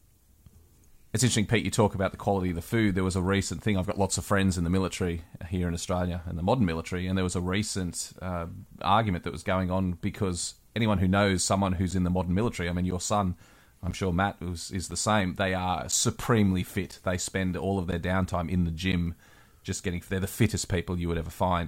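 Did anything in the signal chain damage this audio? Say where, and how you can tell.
Yes, at the driver or buffer stage. Just after "anyone who knows someone", from 11.91 to 18.93 s, the speech carries periodic USB or driver dropouts: about seven short gaps, each roughly 10 ms of silence, spaced exactly 1.0 s apart, so they sound like regular ticks. A recurring background task stalled the USB bus or audio driver, and that audio was lost. The clockwork spacing sets this apart from network packet loss, whose gaps fall irregularly.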